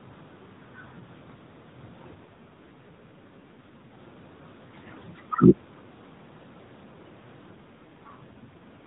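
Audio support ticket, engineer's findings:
AMR rate drop, 2.26–3.99 s and 7.54 s to end of clip. Link adaptation on the radio side forced the AMR-NB encoder down from its 12.2 kbps mode, freeing bits for error protection; the sound fits roughly 5.9 kbps. Speech turns buzzier, more synthetic, with fewer excitation pulses per subframe. Bandwidth unchanged, still capped at 4 kHz; no gaps or dropouts. Quality recovers where the rate steps back up.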